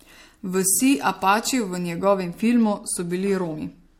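From 0.0 to 2.0 s the speech has pre-emphasis left on. The treble lift matches the CD 50/15 µs curve, and the complementary de-emphasis that should undo it on playback was never applied. The top end therefore sits about 8 dB high at 10 kHz relative to 1 kHz, and the speech sounds thin, bright and sibilant, with sharpened consonants and a lean lower midrange.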